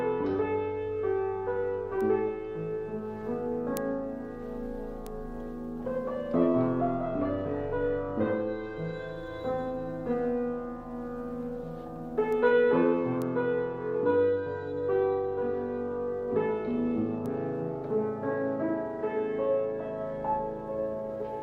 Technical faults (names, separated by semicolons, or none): bit error spike